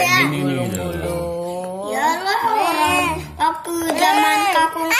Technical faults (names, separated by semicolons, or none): none